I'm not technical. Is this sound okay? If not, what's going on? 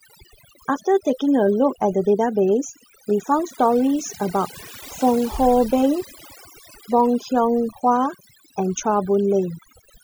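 No. The whole clip has overdone noise removal. A cleanup tool was set too strong. It turned the background noise down, but took quiet parts of the voice too. The background drops and breaks up into twinkling specks.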